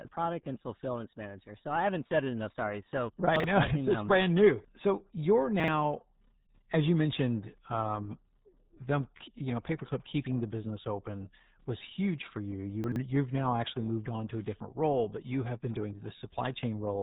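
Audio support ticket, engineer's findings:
RealAudio 14.4 codec throughout: heavy codec damage, muffled and gargly speech, nothing above 3.8 kHz. Consistent with RealAudio 1 at about 8 kbit/s, a dial-up-era speech codec that discards the upper band and coarsely models the rest.

Chunks out of order at 3.36–3.44 s, 5.6–5.68 s and 12.84–12.96 s (after "was huge for you", before "you've now actually moved"): brief jumbled moments. Fits 40 ms blocks written late, one block late in the first two and two in the third. Nothing lost, but each has three hard joins.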